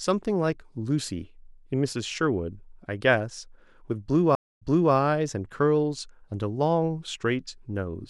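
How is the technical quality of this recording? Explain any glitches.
The recording has one clear glitch, a stream reconnect between 4.35 and 4.94 s. The connection dropped and the player restarted its decoder mid-stream, so the speech cuts to about 245 ms of silence, then resumes 340 ms earlier, repeating a short stretch already heard.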